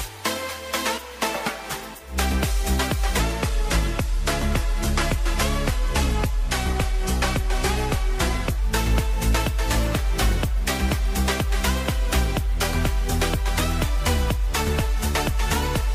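A stretch of the sound was most likely resampled against the wrong clock, so from 3.19 s to 8.59 s the section at the wrong speed plays at 0.862 times its proper rate. Because speed and pitch are tied together here, everything in that span drops by about three semitones and drags, turning deeper and slower, before snapping back to normal speed and pitch at 8.59 s.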